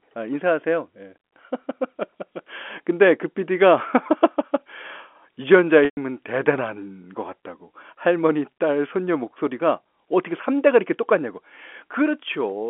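At 5.85 to 5.97 s, 120 ms of packets were lost, and the receiver bridged the gap by repeating the last pitch period: a brief buzzy hold, fading to silence, then a cross-fade back.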